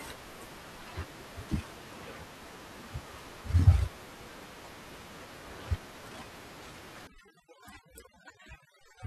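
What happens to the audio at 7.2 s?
From 7.07 s to the end at 9.07 s, the background drops and breaks up into twinkling, warbling specks. That is overdone noise removal: the room noise, sitting about 22 dB below the speech, has been attacked too hard, so individual frequency bands close to the noise estimate are pushed right down or shut off, taking the quieter parts of the speech with them.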